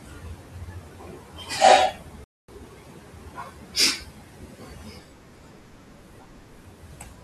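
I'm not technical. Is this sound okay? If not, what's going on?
No. There is a rebuffering stall at 2.24 to 2.49 seconds. The speech stops and goes silent for about a quarter of a second, because the player ran out of downloaded audio and had to wait for more. It then picks up exactly where it left off, so nothing is missing, only delayed.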